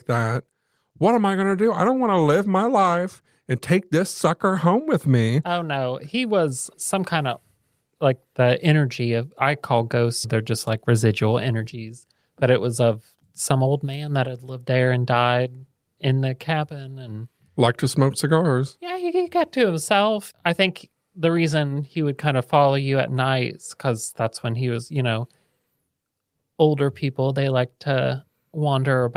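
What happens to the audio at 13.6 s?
Nothing goes wrong at 13.6 s: the audio there is intact, with no dropout, click, distortion or level change.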